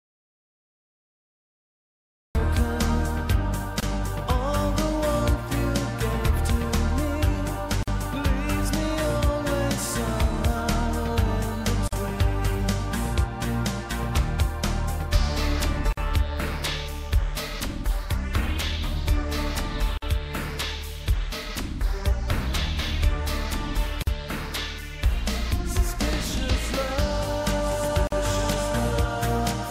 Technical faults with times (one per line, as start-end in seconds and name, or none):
0.00-2.35 audio dropout to silence
3.80-3.83 gap at a join of encoded pieces
7.83-7.88 gap at a join of encoded pieces
11.88-11.93 gap at a join of encoded pieces
15.93-15.97 gap at a join of encoded pieces
19.97-20.02 gap at a join of encoded pieces
24.02-24.07 gap at a join of encoded pieces
28.07-28.12 gap at a join of encoded pieces